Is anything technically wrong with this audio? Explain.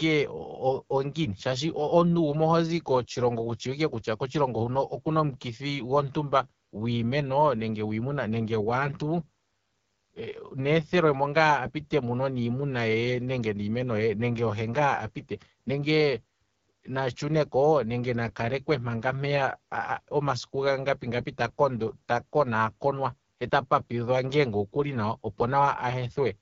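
Yes. The speech has passed through the AMR wideband (HD Voice) codec at a low rate for the whole clip. AMR-WB models speech below 6.4 kHz as pulse trains exciting a vocal tract filter and fills 6.4 to 7 kHz with shaped noise. The coarse roughness heard here points to one of its lowest modes, around 8.85 kbit/s, where the excitation is coded too sparsely. The result is plainly audible damage: a raspy, gritty texture on voiced sounds and hissy, synthetic upper frequencies.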